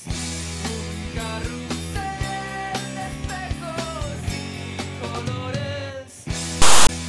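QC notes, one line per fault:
6.62–6.89 s, file tags played as audio: tag text read as samples gives a loud one-sided rasp with hard edges, then zero padding drops to silence.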